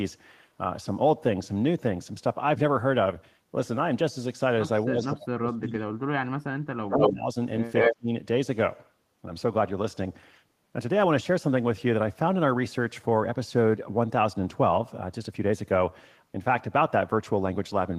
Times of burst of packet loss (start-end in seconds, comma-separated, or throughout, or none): none